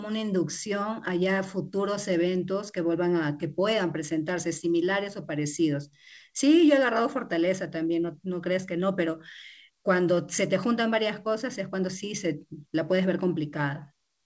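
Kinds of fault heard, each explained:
No faults heard; the speech arrives over a G.722 call path at 64 kbps, with nothing above 8 kHz, which is that codec's normal band limit.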